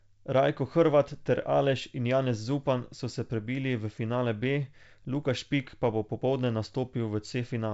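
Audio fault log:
No faults are heard in the speech. The G.722 wideband telephone coding shows as a top end stopping near 7.7 kHz with little or no coding hiss, which fits its 64 kbit/s rate.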